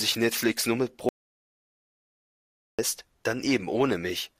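At 1.09 s the speech cuts out abruptly into an audio dropout to silence lasting until 2.79 s, about 1.7 s lost with no room tone at all. Input was likely lost while recording continued; waveform shows a flat line, spectrogram a blank gap.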